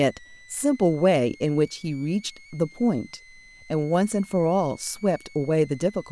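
From start to finish the speech carries a switching supply whistle: a thin, high tone around 2 kHz, sitting well below the speech level. A switching power supply is running in an audible burst mode or beating with another one, and its pitch wanders between about 1.91 and 2.27 kHz as its load shifts. On a spectrogram this appears as a narrow horizontal line running the full length of the clip, bending and stepping within that band, independent of the speech harmonics.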